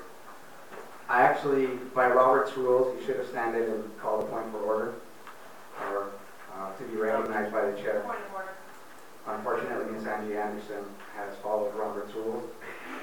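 Periodic USB or driver dropouts run from 3.2 s to 9.29 s, about seven in all, one every 1.01 s. Each time, something stalls the audio path and roughly 10 ms of sound is skipped outright, leaving a regular tick or pop wherever signal is present.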